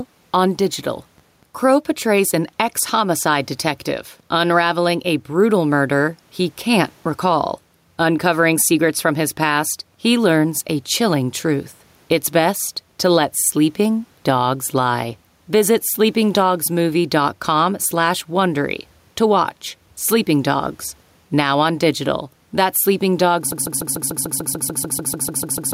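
Speech, with two faults. Gain pumping runs throughout, with the gain swinging by around 5 dB; the room noise sits about 44 dB below the speech. This is likely a fast limiter pulling down excessive gain, and a breathing background is what separates it from steady compression. From 23.52 s to the end, a broken-record loop repeats one 147 ms fragment exactly, fifteen times back to back, and the intended audio is lost. A stalled player or stream resending its last fragment is the likely cause. The identical repeats set it apart from an echo or a stutter.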